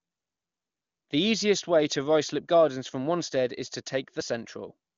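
The speech carries no audible technical faults.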